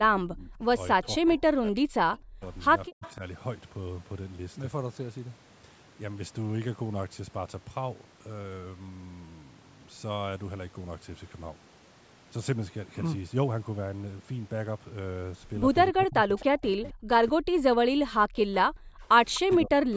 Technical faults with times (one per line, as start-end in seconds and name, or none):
0.00-3.22 speech suppressed in double talk
3.02-3.13 echo leak
15.92-19.97 speech suppressed in double talk
16.39-16.91 echo leak
19.35-19.40 echo leak